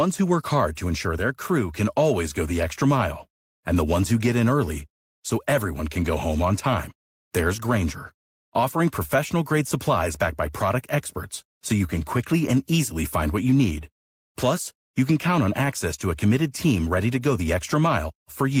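No technical faults can be heard anywhere in the recording; the signal stays steady and intact throughout.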